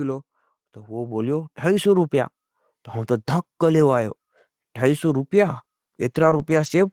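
From 0.75 s to 2.9 s the level climbs steadily by about 8 dB. This is automatic gain rising: the gain control judged the input too quiet and turned itself up gradually. The speech and the background noise swell together over those two seconds. On a waveform the envelope widens smoothly across that span, and on a spectrogram the whole band, noise floor included, brightens evenly, not just the speech harmonics.

Between 5.17 s and 6.68 s the speech turns choppy and robotic. This is repeated packet loss: five gaps fall close together, each no longer than 40 ms, and each is patched by stretching the preceding sound, about 120 ms of concealment in total. On a spectrogram the harmonics freeze into flat, smeared bands at each patch. The waveform shows repeated, overly regular cycles where the natural variation should be.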